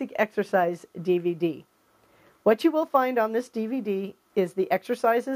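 No technical faults are audible.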